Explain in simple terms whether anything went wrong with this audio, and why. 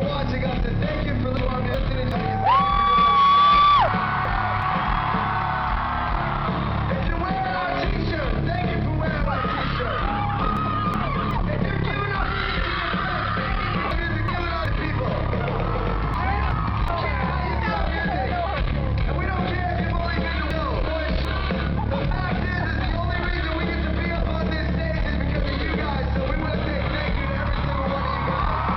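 Six times the sound briefly turns into a garbled flutter, at 1.37–2.12, 3.88–4.62, 10.57–11.31, 13.91–14.66, 16.14–16.88 and 20.51–21.25 s. These are frames out of order: two neighbouring chunks of about 0.37 s each swapped places, which fits about four frames each. Nothing is missing, just played in the wrong order.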